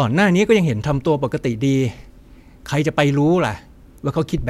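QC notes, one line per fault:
No faults found in the speech. Nothing in the recording calls for a timed entry.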